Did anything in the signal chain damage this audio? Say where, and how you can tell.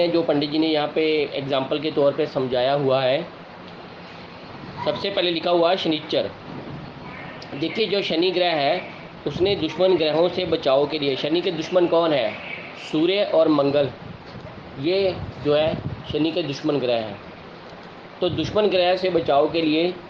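No, nothing in the chain audibly damaged this audio.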